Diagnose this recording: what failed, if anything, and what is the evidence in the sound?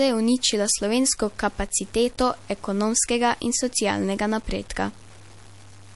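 The sample-format conversion stage most likely reduced the word length with plain truncation and no dither. From start to end the speech carries a grainy, rasping distortion that rises and falls with the level rather than sitting as a steady hiss, sitting roughly 30 dB below the signal. The quietest passages turn rough and broken. That texture points to about a 7-bit word length, where the rounding error tracks the waveform instead of being spread into noise.

The codec stage also damaged the speech, likely through MP3 encoding at a starved bitrate. Nothing is present above 11.3 kHz, so sibilants sound dull and clipped, and throughout the clip the speech has a watery, swirling quality with metallic chirps on s sounds as weak frequency components drop in and out from frame to frame. The damage is plainly audible and fits a low bitrate of about 48 kbps, where the encoder discards treble and sparse spectral detail to fit its budget.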